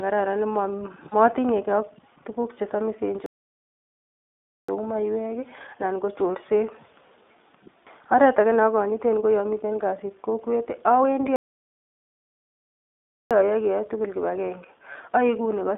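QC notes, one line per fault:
throughout, iLBC codec: The speech is confined to a narrow telephone band of roughly 250 Hz to 3.6 kHz. It has a plainly audible rough, slightly synthetic edge, consistent with iLBC's 15.2 kbps mode and 20 ms frames. The damage is a steady coding texture rather than the brief dropouts or gaps below.
1.10–1.14 s and 14.93–14.96 s (just after "keyae tugul kipagenge"), lost iLBC frames: Each is a brief held, faintly buzzy patch about 20 ms long, which fits one lost frame. The decoder repeated the last pitch cycle with noise. Because iLBC frames decode independently, the voice recovers immediately with no lingering smear, and the gap is filled rather than silent.
3.26–4.69 s (after "ak tukuk chesamisen") and 11.36–13.31 s (after "yomiten kasit kokwet awendi"), playback stall: The sound stops dead into true silence for about 1.4 s and then about 1.9 s before resuming. 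This was likely the player running dry or being blocked. Unlike the lost frames, these gaps are long and empty, with nothing synthesised to fill them.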